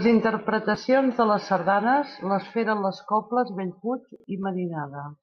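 Speech, with a brief scramble near the end: between about 4.16 and 4.24 s there's a case of chunks out of order. A 40 ms block turns up one slot late and plays after the block that should have followed it, so that 80 ms stretch comes out jumbled. Nothing's actually missing, but the swap leaves three hard joins right where the sound garbles.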